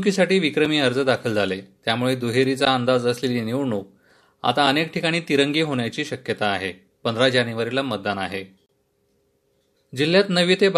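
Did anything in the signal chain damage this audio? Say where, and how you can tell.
Yes. There is a gap between stream segments at the playback stage. Hard-edged dropouts to silence occur at 0.65 s (about 4 ms), 2.65 s (about 13 ms) and from 8.66 to 8.69 s (about 30 ms). They fall close to a 2-second grid, which matches the segment boundaries. The timestamps of adjacent segments don't meet, so the player pads the hole with silence. No audio is lost; time is inserted.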